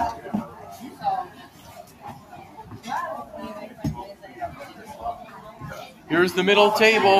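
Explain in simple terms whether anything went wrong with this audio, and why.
The sound pumps and thins, its level swelling and sinking, because a noise suppressor applied to music or sounds was left on and mistook steady parts for noise. Held or fading parts dip at 1.29 to 2.04 s, 2.2 to 2.6 s and 5.93 to 6.09 s. This is sound cut by the noise suppressor, which turned these passages down more than the rest.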